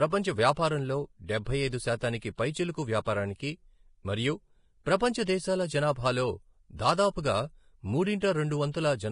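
Throughout the clip the speech has most likely been through heavy Vorbis compression, where the encoder spends so few bits that it drops everything above 10.5 kHz and quantises the remaining treble very coarsely. Fine high-frequency detail is replaced by noise of similar energy, so sibilants and breathy sounds turn hissy and grainy, tonal parts of the voice sound roughened, and consonant onsets lose their edge. This degree of damage fits a bitrate around 31 kbps.

At 8.20 s there is pre-echo. A sharp attack lands late in a transform block, and the codec spreads quantisation noise meant for the loud onset across the whole block, including the quiet stretch just before it. About 17 ms of short hiss arrives ahead of the attack, and the onset itself sounds softened and smeared rather than crisp.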